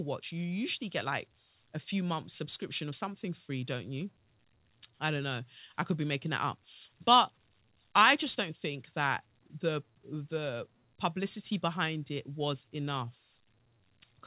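Nothing's actually wrong with this bit of speech; it just carries the narrow, phone-like sound of a call line, with nothing above about 4 kHz, which fits an ordinary G.711 A-law call doing its normal job.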